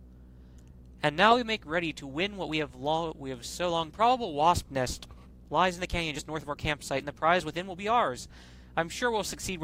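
At 3.89 to 3.91 s, the audio performs a skip ahead. About a second of sound is missing. It was dropped while later audio was already queued. Playback jumps straight on with no gap, and the two sides butt together abruptly.

From 4.01 to 7.92 s, a jitter buffer speed-up follows. The buffer was holding too much audio, so the receiver repeatedly trimmed tiny pitch-period slices, about 0.4 s in total. The sound runs at 111% speed, unchanged in pitch, and feels hurried.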